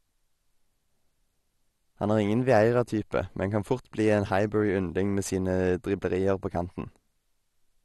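Right through, the speech sounds dull and gurgly with nothing above about 12.2 kHz, the granular, flickering upper bands of likely MP2 compression at a low bitrate.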